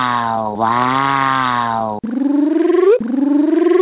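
No technical faults are present.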